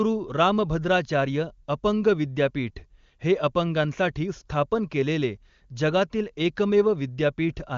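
No technical faults are audible.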